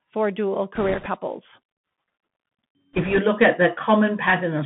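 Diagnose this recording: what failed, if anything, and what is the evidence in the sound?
The codec stage failed. The whole clip has the narrowband sound of the Bluetooth CVSD headset codec. Nothing passes below about 150 Hz or above 3.5 kHz. The sound fits a 64 kbps CVSD stream, where each one-bit sample only steps the waveform up or down. The step size adapts too slowly for loud, bright sounds, so they distort. S sounds turn scratchy, and a granular hiss sits under the speech. The damage is plainly audible.

The wireless link also failed, in two bursts. Bit errors on the Bluetooth voice link appear from 0.75 to 1.07 s and again from 2.93 to 3.18 s, just before "look at". Each burst adds a rushing, crackly noise over the speech. There are no sharp clicks. In CVSD every bit carries the same small weight, and the error fades as the step adapts. The bit error rate sounds like a few percent, slightly higher in the first burst.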